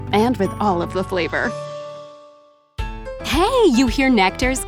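From 0.66 s to 1.88 s the sound goes through a Bluetooth SBC bit pool drop. The encoder cut its bit allocation sharply, which points to a fall from a bit pool near 31 to one near 13, roughly 94 kbps. Starved of bits, the highest sub-bands are given almost nothing and the remaining bands are quantised coarsely. The top end turns dull and a gritty grain sits on the sound until the rate recovers.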